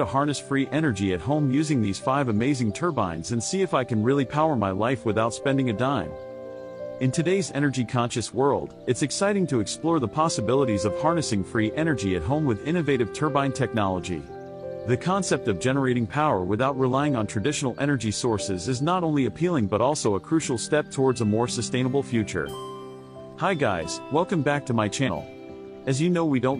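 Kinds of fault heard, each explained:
Damaged data in a compressed stream: from 25.03 to 25.09 s, near the end of the clip, a section of the encoded data is corrupt, so the decoder cannot read those frames correctly. It loses frame sync and hunts for the next valid header before resuming normal output. The result is a brief disruption lasting about 60 ms that breaks into the audio and then clears.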